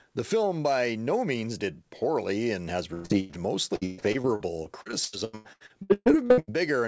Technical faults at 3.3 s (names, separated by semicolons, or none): burst of packet loss